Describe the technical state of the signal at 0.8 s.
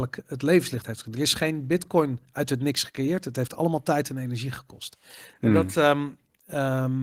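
At 0.8 s the speech signal is intact, with no fault present and the Opus voice compression working as intended.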